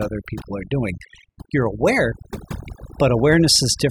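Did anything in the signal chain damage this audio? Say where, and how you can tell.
Yes. Overdone noise removal runs through the whole speech clip, at the call-processing stage. The background drops to near silence flecked with twinkling specks, because an over-aggressive suppressor is shutting off individual frequency bands near its noise estimate, including quiet speech detail.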